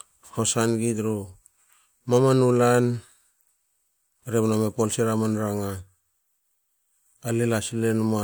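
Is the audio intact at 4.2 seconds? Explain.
Yes, at 4.2 seconds the speech plays through intact, with no audible dropout, click, distortion or other fault at that moment.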